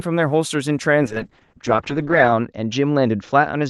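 Speech that turns rough, watery and muffled from 1.05 s to the end, with the top end falling from about 12 kHz to 8 kHz. This is a call bitrate drop: the Opus encoder was starved of bits, consistent with a fall from around 32 to 7 kbps, and stayed at its lowest for about 1.3 s.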